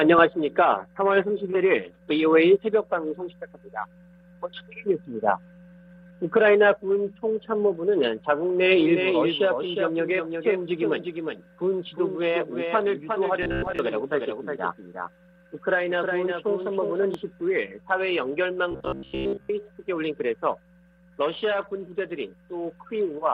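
The audio carries a doubled audio track from 8.80 to 17.14 s: a full-band second copy sits roughly 0.4 s behind the original at about 5 dB lower, with no decay or room colour, and it starts and stops abruptly, likely from a second, slower capture path or a misaligned edit. Robotic sound from repeated short buffers appears at 13.43 to 13.79 s and 18.71 to 19.51 s as a rigid 66.8 Hz metallic buzz, which fits a buffer of about 15 ms being replayed. About half of the first stretch and most of the second are repeats, with the real audio skipped, likely because new buffers arrived too seldom.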